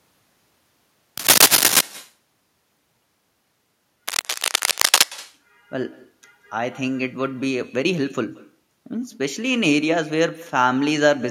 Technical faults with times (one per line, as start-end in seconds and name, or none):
0.00-11.30 echo with no canceller
1.17-1.81 cable scratch noise
4.08-5.04 cable scratch noise